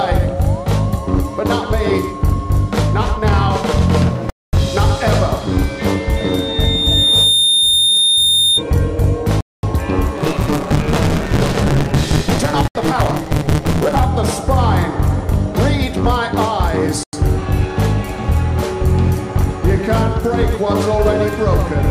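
At 4.30 s the audio drops to silence for 230 ms and resumes at 4.53 s, a likely Bluetooth stall in which delayed packets left the headphone buffer empty. The same gap recurs at 9.41 s (226 ms), 12.68 s (71 ms) and 17.03 s (97 ms).

From 6.16 s to 8.63 s a loudspeaker feedback squeal appears: a single 3.6 kHz tone where the microphone-to-speaker loop gain exceeds unity. It swells over roughly a second and ends up about 5 dB above the programme.

Between 10.17 s and 14.00 s a block size mismatch (truncated) sets in. The tail of each written block is discarded, producing a 150 Hz buzz at the block rate and playback running 1.6 times fast. This points to 512-sample blocks being cut to about 320 samples.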